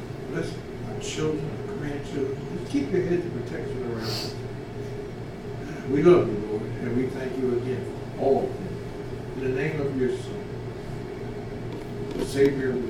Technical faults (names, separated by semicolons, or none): none